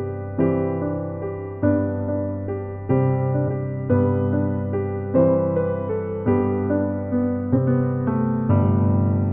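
At 3.44 s the sound lurches forward by roughly a fifth of a second, then again at 5.86 s by about a tenth, and at 7.53 s by around three tenths. That's compressed frames skipped: whole blocks of coded audio never got played, so it jumps ahead in steps that fit a frame of about 46 ms.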